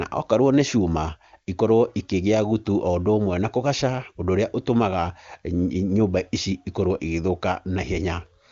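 No faults found in the speech; it passes through the AMR wideband (HD Voice) path with at most faint coding damage and nothing above about 7.1 kHz.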